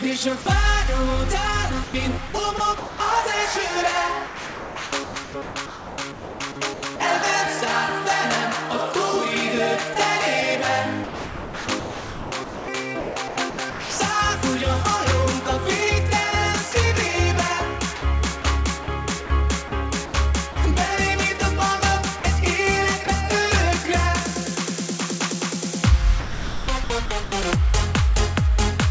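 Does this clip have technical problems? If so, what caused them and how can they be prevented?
Yes. At 0.42 to 0.46 s the sound briefly gives way to steady noise or near silence for about 40 ms before resuming. This is sound dropped by the voice detector: the sender's detector most likely judged that quiet moment to be background and stopped transmitting, so the receiver filled the gap with synthetic comfort noise. Lowering the detector's sensitivity threshold or adding a longer hangover time before it cuts transmission would prevent this.

Five longer stretches sound choppy: 1.84 to 7.00 s (about 2.2 s replaced in total), 9.94 to 14.00 s (about 2.0 s), 16.72 to 20.56 s (about 0.34 s), 22.20 to 23.08 s (about 60 ms) and 26.20 to 27.32 s (about 0.66 s). This is sound chopped by the voice detector. The detector is likely toggling on and off repeatedly, so quiet portions and edges are swapped for comfort noise each time it stops sending. 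Disabling discontinuous transmission, or tuning the detector with more hangover and a lower threshold, would prevent it.

The call path itself, which carries nothing above 8 kHz, fits G.722 at 64 kbps.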